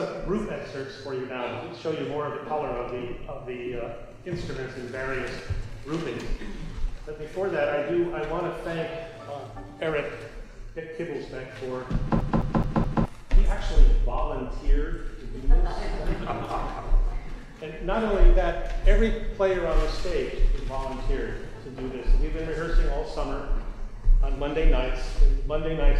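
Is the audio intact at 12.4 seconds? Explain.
No. At 12.4 s the audio is caught in a CD stuck on one turn: from 12.20 to 13.05 s the laser jumps back a track each revolution, so the same 0.21 s slice replays four times, each with a brief mute, giving a fast, even stutter.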